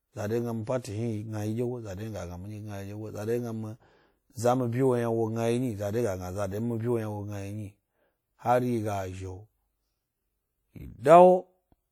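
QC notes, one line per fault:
throughout: WMA compression, likely cause of the plainly audible ringing, washy speech and hiss that rises and falls with the signal; the damage fits a low bitrate near 48 kbps.
0.81–0.84 s: pre-echo, a 34 ms hiss before a sharp speech attack, as quantisation noise spread across the transform block fills the quiet lead-in and softens the onset.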